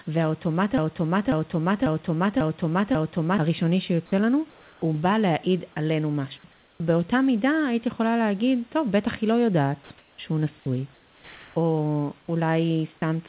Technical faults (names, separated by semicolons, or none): broken-record loop; comfort noise in place of the background; sound dropped by the voice detector